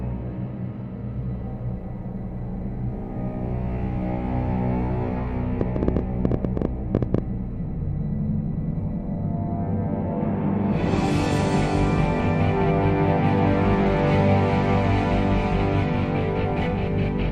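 From 5.61 to 7.19 s, a train of clicks, about twenty irregular pops near 10.8 per second, stands well above the sound, likely from interference or a faulty connection.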